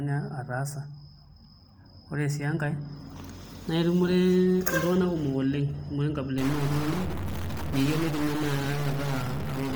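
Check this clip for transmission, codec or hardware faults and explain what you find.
Two faults are present: codec damage across the whole recording and a hardware-type data fault over the final stretch.

From start to end, the speech has a grainy, breathy edge in the upper range. This is likely Bluetooth LC3 compression. The transform codec drops much of the high spectrum and substitutes shaped noise. The heavy damage fits a bitrate around 32 kbps with 10 ms frames, though content still reaches about 20.2 kHz.

From 6.38 s to the end at about 9.76 s, distortion rides on the speech, and the pauses fill with noise. A stuck bit is the likely cause. One data bit held fixed pushes roughly half the samples off by its weight, and it flips with the sign of quiet samples.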